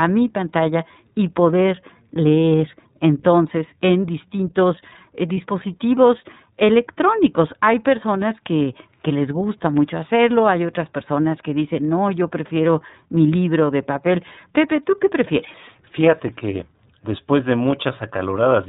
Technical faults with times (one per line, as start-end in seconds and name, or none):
0.00-18.68 iLBC codec
5.34-5.37 lost iLBC frames